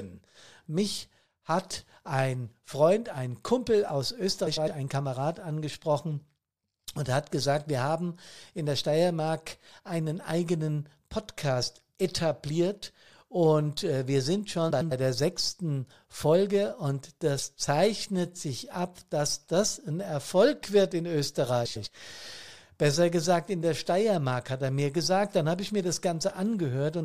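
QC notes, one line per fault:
4.46–4.68 s, 14.70–14.92 s, 21.65–21.87 s: frames out of order. Each stretch plays two swapped halves of about 104.5 ms, which fits four-frame blocks. That produces a garbled flutter. No time is lost.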